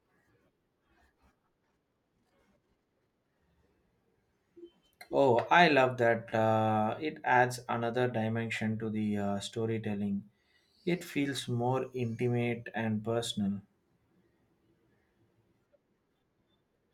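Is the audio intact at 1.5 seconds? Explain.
Yes, at 1.5 seconds the speech runs cleanly with no audible fault.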